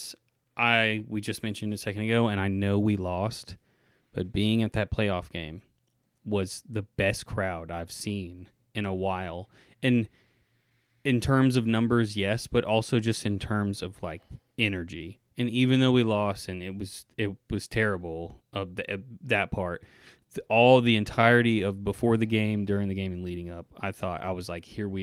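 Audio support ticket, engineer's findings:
Clock drift between sender and receiver. Heard throughout. Sender clock runs about 2% slow against the receiver. Jitter buffer keeps draining. Receiver has to stretch playback to avoid running dry. Probable component: sender clock versus receiver playout clock.

Repeated timing corrections, 0.20 s to 24.27 s. Small hiccups at uneven intervals. Playback runs at 98% speed. Receiver repeats short pieces, all in the same direction. Roughly 0.4 s added over the stretch. Probable component: jitter buffer adaptation.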